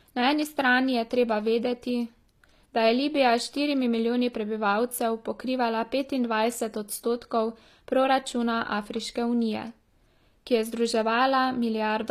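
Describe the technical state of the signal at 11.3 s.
At 11.3 s the speech carries the same damage as the rest of the clip, likely HE-AAC compression. The treble is rebuilt from copied lower bands, so s sounds turn gritty and lispy. Nothing reaches above 14.9 kHz, which fits roughly 24 kbps.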